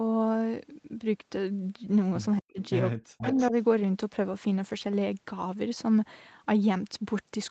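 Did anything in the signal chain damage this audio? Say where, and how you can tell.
Yes. Speech suppressed in double talk at 2.4–2.59 s and 2.94–3.54 s: the speech drops by as much as about 40 dB, over roughly a sixth of a second and then about 0.4 s. This happens in the call processing, likely an echo canceller that turned down the local talker while the far side spoke.

Echo leak at 2.63–2.69 s and 3.18–3.51 s: a copy of the speech returns 238 ms late, first faintly at about 30 dB below the speech, then much stronger at about 10 dB below. The echo canceller likely did not fully remove the loudspeaker pickup, so the residue was sent back.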